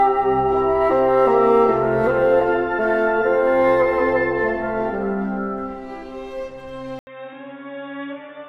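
Input switched to a poorer device at 6.99 s, lasting to the end. After an 80 ms silence the sound drops about 10 dB, loses everything above 3.7 kHz and turns boxy over a faint new noise floor, likely from a narrower-band microphone or headset profile.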